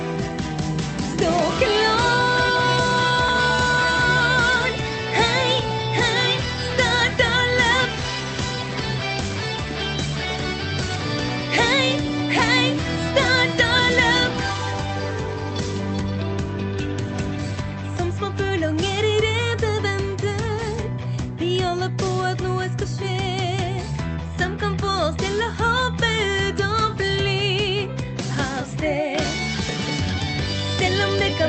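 There are no technical faults to describe at any point in the clip, which carries only the ordinary character of a call codec path.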